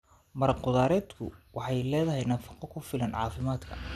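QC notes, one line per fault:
Throughout, MP2 compression: the speech sounds dull and carries a gurgling, granular roughness, which points to a likely low-rate MPEG Layer II encode, consistent with something near 80 kbps. Starved of bits, the coder shuts off upper sub-bands and quantises the rest coarsely, so nothing survives above about 14.3 kHz. A spectrogram shows a hard ceiling there, with upper bands flickering in blocky patches, while the waveform looks ordinary.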